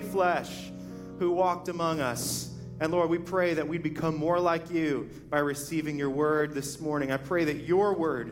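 Nothing here calls for comment, as no technical faults turn up anywhere in the clip.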